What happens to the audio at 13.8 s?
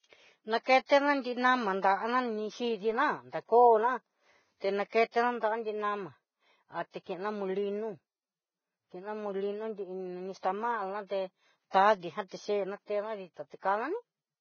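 At 13.8 s the speech carries likely Vorbis compression, as it does throughout. Nothing remains above 6.6 kHz. Coarsely quantised treble turns hissy and grainy, which fits a bitrate near 16 kbps.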